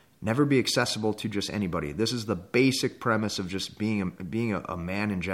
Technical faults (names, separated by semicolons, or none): none